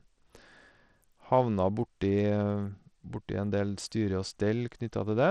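Throughout the speech, the treble flickers in and out and a gritty grain rides on the voice, likely from Bluetooth SBC compression with a starved bit pool near 80 kbps. Unlike a plain low-pass filter, the top end wavers instead of stopping cleanly.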